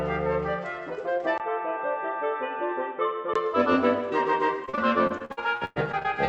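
Input switched to a poorer device from 1.38 s to 3.36 s. After a 20 ms silence at the switch, the sound turns dull and boxy, with nothing above 3.8 kHz. The level drops by about 5 dB and a faint new noise floor appears. The likely cause is a change to a lesser microphone or a headset's call profile.

Repeated packet loss (robotic sound) runs from 4.65 s to 6.06 s. About a dozen holes, the longest 107 ms, are each patched by stretching the preceding sound. Roughly 30% of the stretch is filled this way, which produces choppy stuttering with pieces missing.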